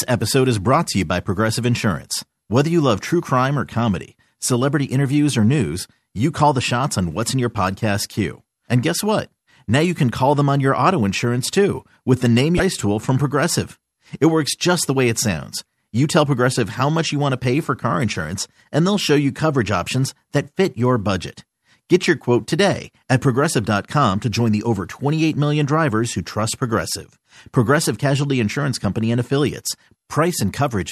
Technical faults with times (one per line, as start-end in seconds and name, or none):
12.57-12.60 damaged data in a compressed stream